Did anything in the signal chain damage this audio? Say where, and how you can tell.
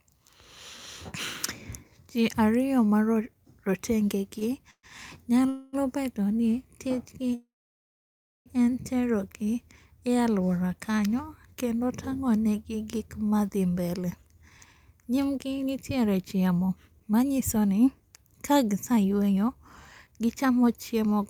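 Yes, in two ways, both at the network and jitter-buffer stage of a call.

Call audio freeze: at 4.71 to 4.86 s, 5.49 to 5.76 s and 7.35 to 8.49 s the sound stalls. The last sound is stretched into a fading buzz. It then drops to silence for about 70 ms in the first gap and nearly a full second in the third. Speech then resumes exactly where it stopped, so nothing is lost and each gap adds delay. That sets this apart from packet loss, where sound is cut out. The likely cause is delayed packets emptying the buffer.

Jitter buffer speed-up: from 13.40 to 19.49 s the speech runs at about 112% speed, and from 20.07 to 21.21 s at about 109%. Pitch stays unchanged and the delivery sounds hurried. The receiver is trimming short pitch-period slices to drain surplus buffered audio, roughly 0.7 s in the first stretch and around a tenth of a second in the second. Resampling or clock-speed errors would raise the pitch too, which doesn't happen here.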